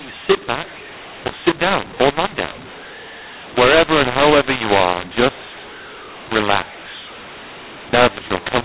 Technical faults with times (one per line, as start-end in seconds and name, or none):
0.00-8.64 mu-law and A-law mixed up